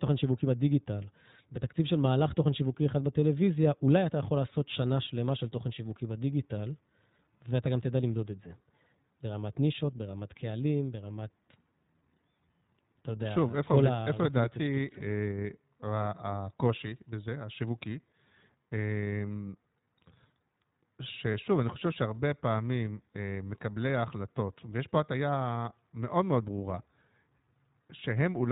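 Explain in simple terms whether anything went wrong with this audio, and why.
Two things went wrong. The whole speech clip was squeezed through the iLBC codec, a narrowband phone codec. It throws away everything above 4 kHz, so the voice sounds dull and boxed in. Each short slice of sound is coded on its own, which fits 20 ms frames. That leaves the speech clear but slightly rough and synthetic. Here the damage is plainly audible from start to finish.

From 21.32 to 21.35 s there is a brief patch from lost iLBC frames, which fits a single missing 20 ms frame. A piece of the stream never arrived. The decoder filled the hole by repeating the last bit of voice mixed with a little noise. You hear a tiny held, buzzy smear. Because each frame stands alone, the voice snaps back right away.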